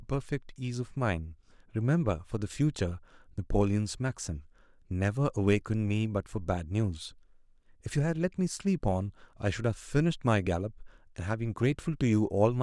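Nothing in the recording stood out as a technical fault on listening.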